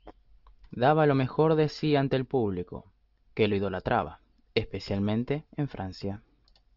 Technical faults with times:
none

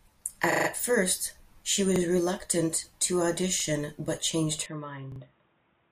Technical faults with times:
0.52-0.68 repeated buffer
1.96-2.00 repeated buffer
4.66-5.91 input switched to a poorer device
5.12-5.20 repeated buffer

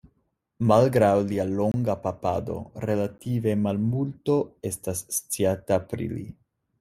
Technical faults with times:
1.72-1.74 block of digital silence
3.18 block of digital silence

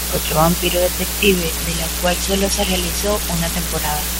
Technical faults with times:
0.00-4.20 low bit depth with dither
1.35-3.79 Bluetooth SBC bit pool drop

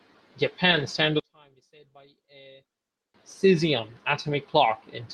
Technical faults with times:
0.71-0.81 lost packet rebuilt from error correction
1.20-3.14 one channel inverted

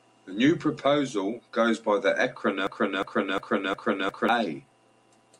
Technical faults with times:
2.67-4.29 broken-record loop

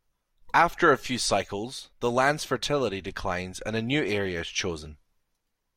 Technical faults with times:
none

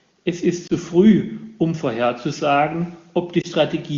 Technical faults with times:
0.67-0.72 lost AMR speech frames
3.41-3.46 lost AMR speech frames

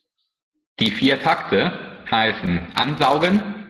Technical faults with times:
1.95-3.01 repeated stalls (stutter)

